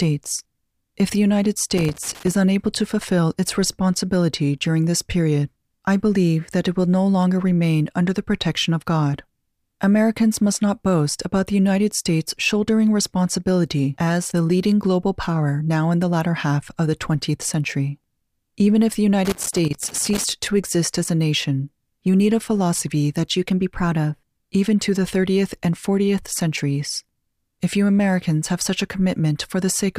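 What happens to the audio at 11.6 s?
Nothing goes wrong at 11.6 s; the audio runs on intact through that moment, with no dropout, click or other fault.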